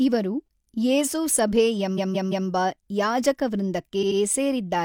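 Repeated frames occur from 1.94 to 2.45 s, just after "ಇವರು ಯೇಸು ಸಭೇ": a 170.7 ms block plays three extra times, adding 512 ms as a stutter. From 3.99 to 4.16 s, an 85.3 ms block plays twice more, adding 170.7 ms. Both fit compressed frames being resent to the decoder.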